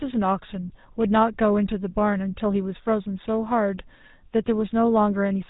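From start to finish, the speech carries the sound of the GSM full-rate codec. Nothing survives above about 3.8 kHz, so the top end is gone and the voice sounds closed in. The codec models the vocal tract and excites it with a coarse, regular pulse pattern. That thin excitation leaves a buzzy, gravelly roughness on the voice. The damage is plainly audible, and it fits a 13 kbps GSM stream.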